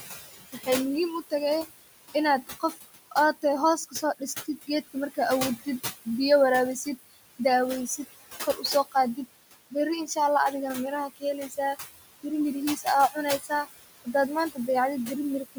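Throughout the clip a noise suppressor is pulling down whatever bands it judges to be steady noise, frame by frame, by about 16 dB. The room noise, sitting about 12 dB under the speech, dips between phrases and swells back beneath them.

The same suppressor repeatedly mistakes parts of the speech for noise and turns them down by about 12 to 20 dB. This happens at 0.52 to 0.68 s just before "muhiim u tahay inaad", at 2.47 to 3.44 s just after it, then at 3.77 to 5.18 s, at 8.54 to 9.18 s after "biyo waraawisid daweysid kor", at 11.09 to 11.58 s, and at 12.76 to 13.67 s. In each window only brief fragments are caught, so soft consonants and word endings sound swallowed or faint.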